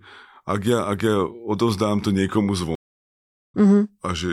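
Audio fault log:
2.75–3.55 s, stream reconnect: the speech cuts to about 0.75 s of total silence as the connection drops and the player reconnects, then resumes with a freshly started decoder at a later point in the stream, skipping roughly 0.4 s of material. Unlike a simple dropout or buffer underrun, where playback picks up exactly where it stopped, the reconnect jumps forward and loses that stretch of speech, and the restart comes in muted or faded rather than as an abrupt return.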